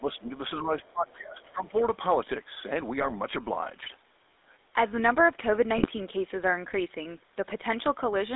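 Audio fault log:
Throughout: GSM full-rate codec. The sound has a buzzy, gravelly roughness. The band runs only from about 300 Hz to 3.7 kHz. The codec rebuilds the signal from a vocal-tract filter driven by sparse regular pulses, which fits the 13 kbps full-rate coder.
0.00 to 1.84 s: speech suppressed in double talk. The level sinks, by about 20 dB at worst, across roughly one and a half seconds of this stretch. The likely cause is an echo canceller facing both sides at once and turning everything down.
0.80 to 0.86 s and 1.41 to 1.51 s: other side's voice leaking through. Faint scraps of a second voice appear, around 30 dB and 35 dB below the main speech. The likely cause is far-end loudspeaker sound that the echo canceller left in the microphone signal.
3.00 to 3.11 s and 5.76 to 5.88 s: GSM bit errors. Each burst gives brief squawks and gargling. Corrupted filter, pitch and gain values bend the spectrum and jolt the level. 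Each run lasts about a tenth of a second, which points to a handful of damaged frames.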